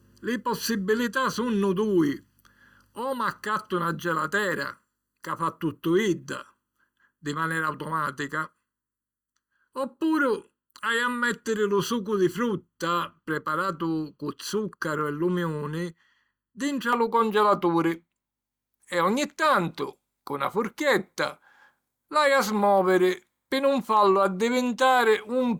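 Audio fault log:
0.0–16.93 s: channel delay (comb filtering). One channel of the speech lags the other by a little under a millisecond before the two are summed to mono. Cancellation carves fixed notches starting around 700 Hz and repeating evenly upward. The sound turns hollow and phasey.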